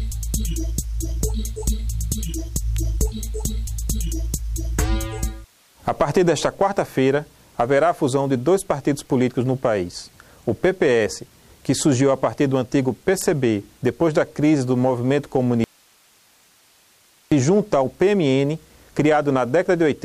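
At 2.77 s and again at 13.21 s, an electrical switching spike snaps through, likely arcing from a nearby switch; each shows as a thin full-height vertical line and a needle in the waveform. From 15.64 to 17.32 s, an audio dropout to a faint residue leaves about 1.7 s of hiss roughly 35 dB down, likely a lost signal on a still-live path, seen as an abrupt, near-flat gap.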